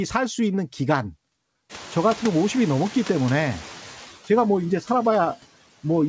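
Noise suppressor artifacts run through the whole clip: the background is pulled down by about 13 dB between phrases and swells back under the speech. Around 1.5 s the room noise jumps by roughly 25 dB, and from 1.69 to 3.95 s the noise suppressor is catching up. Its noise estimate lags, so the louder noise passes with only about 5 dB of reduction before sinking over 2.26 s. That gradual settling distinguishes it from a gain or gate change.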